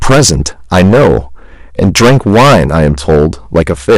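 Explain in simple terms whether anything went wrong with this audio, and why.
Yes, this speech has hard clipping from start to finish. The recording was pushed far louder than one stage could handle, so every loud moment had its peaks sliced off flat, and a sizeable share of the sound sits against that ceiling. That is why every loud sound carries a harsh, buzzy fuzz rather than the odd crackle. Unlike background hiss, this roughness appears only while sound is present and stops in the gaps.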